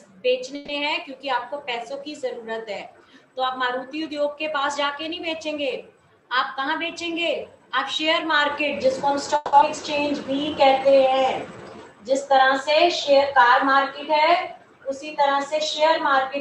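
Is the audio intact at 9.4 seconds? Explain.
No. A call audio freeze covers 9.36 to 9.55 s. The sound stops moving forward and the last fragment is stretched into a fading buzz or hiss. It never drops to silence. The filler lasts 170 ms. The likely cause is packets held up in transit, which left the receiver's jitter buffer empty. When delivery resumes, playback continues from the same point. Nothing is lost. The rest of the audio simply arrives about 170 ms later.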